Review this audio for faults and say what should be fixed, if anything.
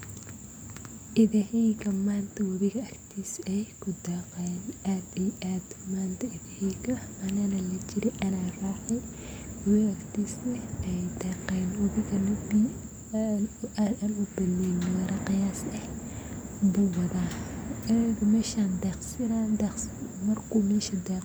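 Nothing needs fixing: the signal holds steady and intact across the whole speech recording, with no technical problems to address.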